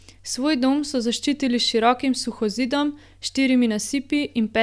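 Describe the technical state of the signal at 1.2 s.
At 1.2 s the speech signal is intact, with no audible fault at that moment.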